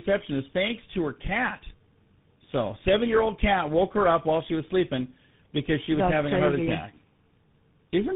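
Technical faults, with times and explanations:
throughout: tandem speech coding. The speech passed through three speech codecs, each recoding the previous one's errors. Its rough, warbly grain fits two GSM full-rate stages and a final CVSD stage. Nothing remains above 3.8 kHz, so it sounds muffled.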